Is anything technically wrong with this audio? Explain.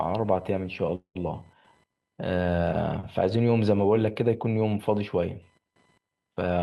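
Yes, three faults are audible.

Computer activity noise runs through the whole clip: a faint buzzing at roughly 1 kHz, about 40 dB below the speech. It tracks the computer's load changes through the shared audio ground, not the speech, so it persists between phrases.

From 0.95 to 1.17 s the speech stalls into a call audio freeze. The last sound is stretched into a fading buzz ending in about 90 ms of silence, and the speech resumes intact. Delayed packets likely emptied the jitter buffer, inserting about 0.2 s of extra delay.

From 6.44 to 6.58 s a jitter buffer speed-up plays the speech at about 164% of normal rate with unchanged pitch. The receiver trimmed roughly a tenth of a second of audio in short pitch-period pieces to reduce excess buffered delay, so this stretch sounds hurried.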